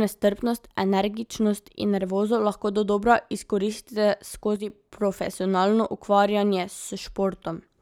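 At 4.56 s, after "nervozo lahko dodobra izkoristite", the speech drops by about 6 dB until 4.7 s. One channel likely dropped out.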